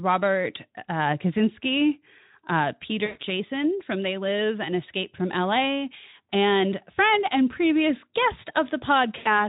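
A speech clip carrying two dropouts from VoIP packet loss concealed by the speech codec. The first runs from 3.05 to 3.24 s, the second from 9.17 s to the very end at 9.48 s. In each, the decoder keeps repeating its last pitch and vocal-tract shape while fading the gain. The voice smears into a buzzy tone or coloured noise that thins away. The gaps sound like about 140 ms and 80 ms of missing audio, which fits runs of 20 ms frames. The light Speex coding adds only light coding damage.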